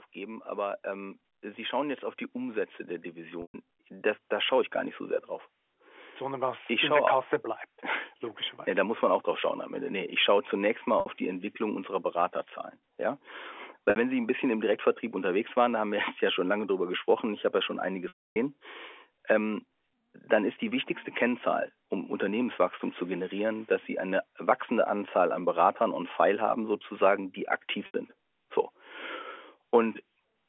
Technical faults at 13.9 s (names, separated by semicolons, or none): packet loss with pitch repetition